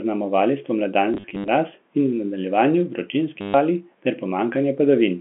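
From 1.14 to 1.48 s, just before "mraz in", packet loss with the last packet repeated produces a robotic stutter as missing audio, about 180 ms scattered in runs up to 70 ms, is refilled by replaying packets. A 100 Hz buzz suggests 10 ms packets. From 3.41 to 3.54 s, before "vali ter", a 130 ms gap stutters the same way over the band-limited telephone sound.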